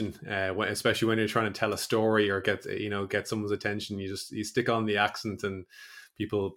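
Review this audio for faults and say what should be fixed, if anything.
No faults found in the speech; nothing needs fixing.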